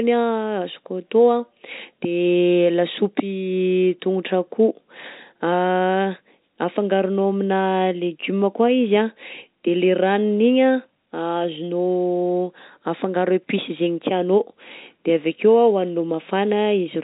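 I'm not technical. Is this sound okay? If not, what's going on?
Yes, nothing is wrong with this speech recording. It has the slightly narrow sound of an ordinary landline call, because G.711 telephone coding carries nothing above about 3.8 kHz, so the crisp top end of the voice is absent.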